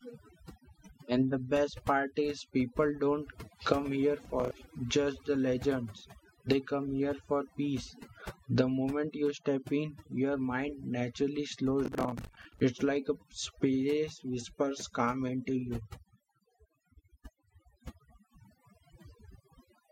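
Speech runs through the whole clip with overdone noise removal: the background has been pushed to near silence, leaving twinkling specks in the pauses, while quiet parts of the voice were cut away with the noise. Unlike codec artefacts, these specks sit where the hiss used to be. Processor overload crackle tears through 4.25–4.51 s and, for longer, 11.85–12.61 s. Missed buffer deadlines let stale audio with hard edges replay in short slices, which fits buffers of around 10 ms. It sounds gritty rather than like gaps of silence, and it stops as soon as the load passes.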